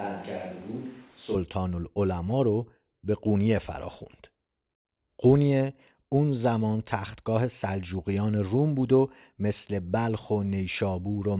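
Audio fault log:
0.00–1.35 s, switch to a distant microphone: the clip opens already in this state, with the sound roomy and hollow, thin in the bass, about 10 dB quieter, and carrying room noise only about 25 dB below the speech. At 1.35 s it snaps back to close, full sound. Because tone, level and room noise all change together and the change is abrupt, a likely cause is a fallback to a farther microphone, not a simple gain dip or added reverb. The narrowband call path, with nothing above 4 kHz, stays the same on both sides of the change.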